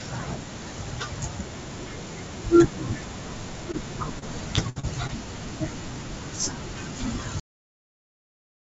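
Short concealed packet loss at 3.72 to 3.75 s: about 20 ms of the call arrived too late for the decoder, and the receiver bridged roughly 12 ms of it by extending the preceding sound, either from its pitch or as shaped noise, before crossfading back into the real signal. It is heard as a brief smear or wobble, with the audio band topping out at 8 kHz as a wideband call codec such as G.722 would leave it.

Repeated packet loss (robotic sound) from 4.19 to 5.11 s: five separate holes open in quick succession, totalling about 160 ms missing, the longest 61 ms. Each one is patched by stretching the last sound, and about 17% of that stretch ends up as concealment rather than real audio. Because the next gap arrives before the audio has settled, the passage turns choppy, with fragments dropping out.

Cut-off end at 7.40 s: the final buffers were never written or played out, so the audio halts mid-sound instead of decaying naturally. 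It falls straight to digital silence, which lasts for the rest of the clip. The abrupt stop gives a hard edge where a tail should be.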